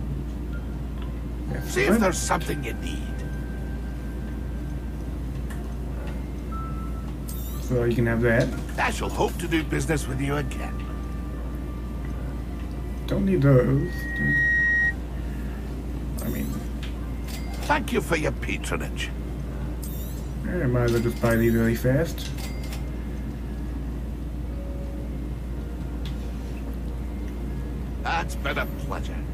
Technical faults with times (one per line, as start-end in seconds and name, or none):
13.76-14.95 loudspeaker feedback squeal